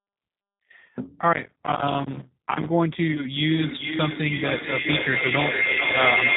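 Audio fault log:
Throughout: G.729 codec. The band stops at 4 kHz, and the sound has the rough, synthetic edge of speech rebuilt from a vocal tract filter, a pitch predictor and a few pulses per frame. The damage is plainly audible and fits an 8 kbit/s G.729A stream.
3.12–3.27 s: VoIP packet loss concealed by the speech codec. About 30 ms of audio is missing, which fits a single lost packet. The decoder fills the gap by extending its last pitch and filter with falling gain. The sound stays weakened until about 3.27 s while the predictive frames recover.
3.5 s to end: feedback howl. A second device on the call closes a loop from loudspeaker to microphone, and each trip adds gain. The repeats narrow to a tone around 2 kHz, with a loop delay of roughly 0.4 s. It peaks about 3 dB above the speech and is still going when the clip ends.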